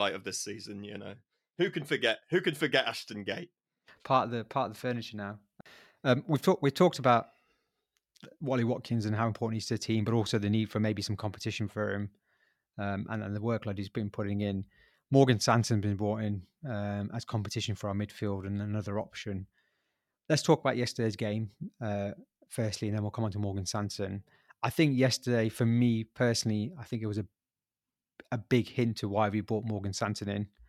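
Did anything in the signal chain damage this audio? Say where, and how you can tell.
No, nothing along the chain has audibly damaged this speech recording, and the signal holds steady and intact throughout.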